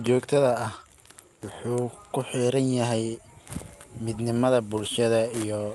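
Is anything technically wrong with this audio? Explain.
No, nothing stood out as technically wrong on listening to this speech clip.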